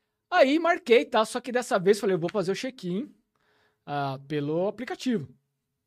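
Speech, with no technical faults to report. Nothing in the audio calls for a time, a cause or a fix.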